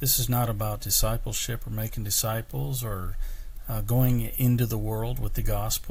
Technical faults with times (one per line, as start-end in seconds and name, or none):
none